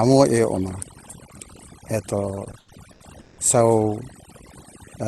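Across the whole recording, the background sinks to near silence dotted with twinkling specks. This is overdone noise removal: the suppressor was set so aggressively that it pulled down individual frequency bands near its noise estimate, taking quieter parts of the voice along with the noise.

From 2.35 to 3.39 s, the speech drags and stutters, catching and holding seven times, with the longest hold lasting about 180 ms. These are repeated stalls (stutter): packets arrived too late, so the jitter buffer kept running dry and the receiver stretched the last sound to fill roughly 410 ms, about 39% of that stretch, without dropping any audio.

From 4.64 to 5.05 s, the speech slows to about 91% speed at an unchanged pitch, with drawn-out sounds. This is a jitter buffer slow-down: to rebuild its reserve, the receiver repeated short pitch periods, adding about 45 ms over that stretch.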